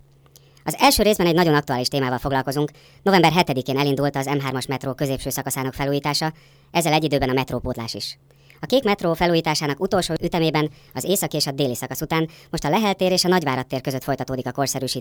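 Throughout this speech clip the voice sounds high and hurried, running about 1.38 times too fast and roughly 5.5 semitones sharp. This is a wrong sample rate fault: speed and pitch rise together, which fits 32 kHz audio played at 44.1 kHz without conversion.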